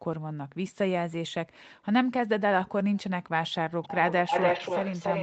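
From 3.82 s to the end, the speech repeats 288 ms late at roughly equal loudness. The likely cause is an echo leak.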